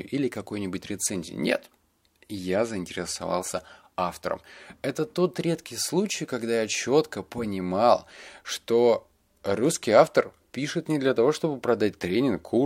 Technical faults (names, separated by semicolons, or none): none